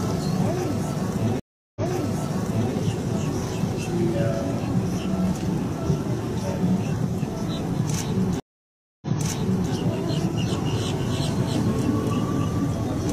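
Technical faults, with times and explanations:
1.40–2.73 s and 8.40–9.71 s, stream reconnect: The connection dropped twice. The player fell silent for 0.36 s, then 0.62 s. A fresh decoder then restarted mid-stream. Each time the server resent a burst, so playback jumps back about 0.98 s, then 0.70 s, and repeats that audio.
10.49 s to end, doubled audio track: From here a second full-band copy trails the original by roughly 0.3 s, about 5 dB quieter. It has no decay or room colour and starts abruptly. A slower second capture path likely added the copy.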